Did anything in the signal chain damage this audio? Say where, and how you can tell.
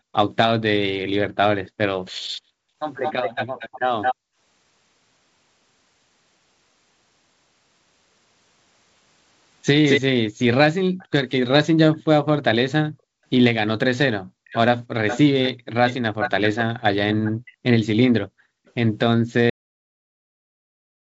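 Yes. Echo leak at 1.66–4.15, 9.89–12.03 and 14.45–18.72 s: delayed copies trail by 218, 313 and 385 ms, visible as shifted repeats on a spectrogram, likely from an incompletely cancelled loudspeaker path.

Background gated by the echo canceller at 10.08–10.98 and 12.9–13.2 s: the room noise floor drops about 40 dB, roughly 300 ms each time, as dark gaps on a spectrogram.

Cut-off end at 19.50 s: the waveform stops mid-sound into flat digital silence with no decay, showing that the final playback or storage buffers were never written.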